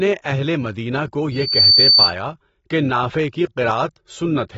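AAC compression, heard throughout the speech: nothing is present above 7.6 kHz, and the codec damage is plainly audible. The sound is dulled and smeared. The cause is likely an AAC-LC encode at a low bitrate, around 24 kbps judging by the sound. At that rate the encoder quantises its frequency lines coarsely against a hearing model and lowers the cut-off, discarding the top of the spectrum to save bits.

Loudspeaker feedback squeal, from 1.32 s to 2.14 s: a single tone at 4.6 kHz swells up over roughly a third of a second and then sits about 10 dB above the speech until it stops. A microphone was picking up the loudspeaker it was feeding. At 4.6 kHz the loop's gain went past one, so that frequency fed on itself and grew into the squeal.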